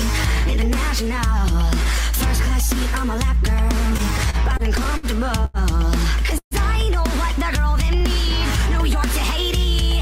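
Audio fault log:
3.97–5.06 s, repeated stalls (stutter): eight brief holds totalling about 156 ms, the longest 60 ms, as packets arrived late and the jitter buffer kept emptying. The receiver extended the last sound each time, so the audio drags. On a spectrogram this appears as repeated smeared, horizontally stretched frames.
5.45–5.57 s, short stall from a late packet: one packet came about 90 ms late, so the receiver held the preceding sound for 90 ms before resuming where it stopped, with nothing lost. On a spectrogram this looks like a single flat, frozen band with a slight level dip in the waveform.
6.38–6.54 s, call audio freeze: the sound stops, a fading buzz continues the last moment, then about 80 ms of silence follows before the audio resumes, 132 ms later than it should. The likely cause is packets held up in transit. The waveform shows a decaying tail into a flat gap.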